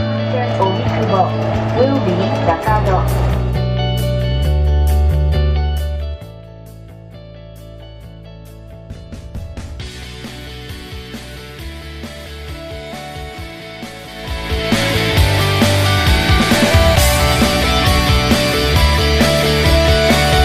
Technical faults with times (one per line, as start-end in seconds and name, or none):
5.47-6.47 zipper noise
14.06-14.83 zipper noise